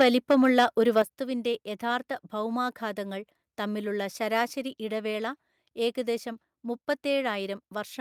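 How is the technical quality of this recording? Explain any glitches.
The recording has technical problems concentrated in its first second: the loudest speech peaks are distorted, and the level then drops twice in abrupt steps.

The microphone overload comes at 0.00 to 0.03 s, 0.30 to 0.66 s and 0.97 to 1.01 s, where the peaks take on a harsh, crackling edge. The likely cause is input gain set too high, driving peaks about 5 dB, and in the last case about 3 dB, past the converter's ceiling so their tops are sliced flat. In the opening burst roughly a fifth of the waveform is cut off. In the later two only a small share is.

The microphone volume is stepped down at 0.02 s and again at 1.02 s. Each time the speech and the background fall together in a sudden jump, by about 3 dB and then by about 7 dB, the second right after a distorted peak. This likely comes from the call software detecting the clipping and cutting the device's input volume in a single step rather than fading it gradually.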